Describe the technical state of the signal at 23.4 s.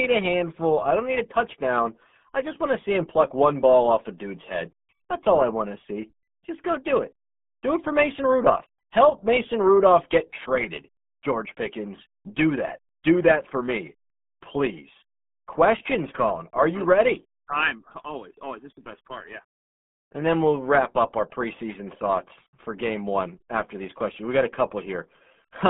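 At 23.4 s the speech carries RealAudio 14.4 codec damage, as it does across the whole clip. This early dial-up speech codec squeezes the signal into a very low data rate, which fits about 8 kbit/s. The band runs from about 150 Hz to 3.5 kHz, and nothing passes above 3.7 kHz. The heavy coding damage makes the speech sound muffled and gargly.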